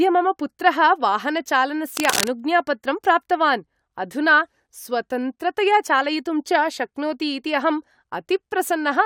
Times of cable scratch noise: 1.95-2.28

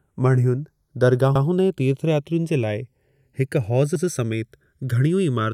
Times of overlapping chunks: 1.35-1.46, 3.95-4.06

